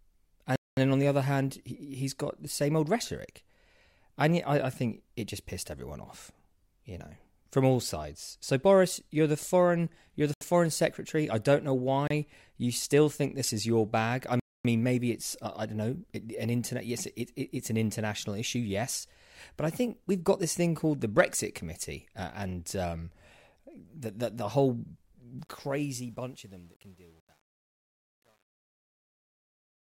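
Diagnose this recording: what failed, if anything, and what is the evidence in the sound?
The speech cuts to silence at 0.56–0.77, 10.34–10.41, 12.08–12.11 and 14.40–14.65 s, then resumes. These Bluetooth stalls are likely wireless-link dropouts that emptied the receiver's buffer. On the waveform they appear as flat silent gaps, and on a spectrogram as blank vertical bands.

Truncation distortion on the fade, from sample-format conversion, sets in at 25.39 s, and is worst from 26.07 s to the end. The tail turns gritty, which fits about 9-bit undithered requantisation. On the waveform it shows as staircase steps, and on a spectrogram as broadband grain.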